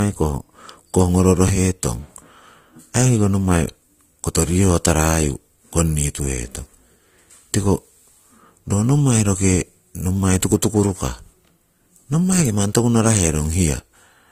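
Throughout, transcoding between lossy codecs, likely Opus then AAC-LC at 48 kbit/s, layers smeared artefacts; the spectrogram goes empty above 15.2 kHz.

At 1.48 s, chunks play out of order. A 5.33 ms chunk lands two chunks late, causing a jumbled moment with three abrupt waveform steps.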